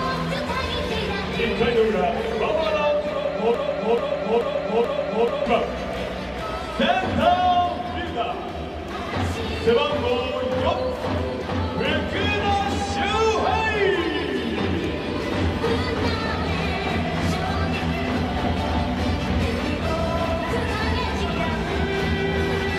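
A stall in the playback or streaming chain, most likely the player or encoder freezing and resending the last fragment it held, causes a broken-record loop from 3.54 s to 5.46 s. A 0.43 s slice of audio repeats four times back to back, each pass identical, so the sound stutters in a rigid cycle rather than moving forward. Whatever should have played during those two seconds is gone, and the audio resumes afterwards with that stretch missing.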